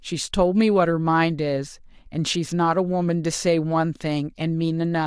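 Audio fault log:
No fault in this speech clip.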